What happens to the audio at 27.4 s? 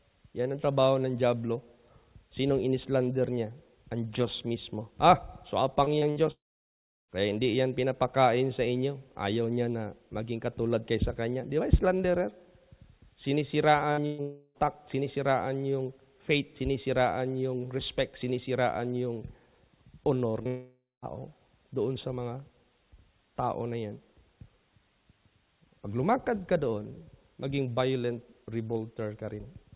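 Nothing goes wrong at 27.4 s; the audio is intact there, carrying only the steady narrowband character of the call path, with nothing above 4 kHz.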